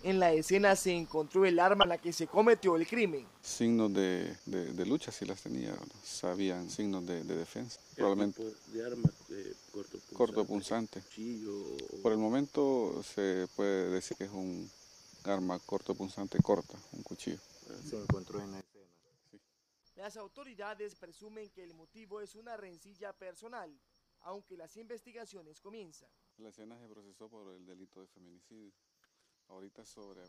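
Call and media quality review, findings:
Damaged data in a compressed stream, 1.79–1.85 s and 14.10–14.15 s: two brief glitches, about 58 ms and 55 ms. Corrupt frames misread or dropped by the decoder, which loses sync and resumes at the next valid frame header.

One channel inverted, 18.6 s to end: mono-summed sound drops by about 21 dB, leaving a faint residue. Likely reversed polarity on one stereo channel, so content common to both channels cancels and only the channel difference remains.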